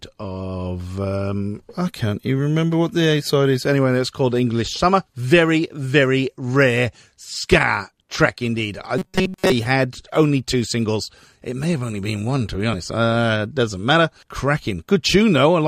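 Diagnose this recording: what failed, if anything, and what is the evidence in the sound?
From 8.98 to 9.52 s, just before "had only", the speech turns into a rigid 188 Hz metallic buzz. That's robotic sound from repeated short buffers, likely a starved driver or buffer replaying roughly 5 ms chunks.

Compressed frames skipped at the codec stage: there are jumps at 10.52 s, between "had only" and "singles it may have", and at 12.73 s, after "been one to be". Each one drops a single 23.2 ms frame, about 20 ms of audio.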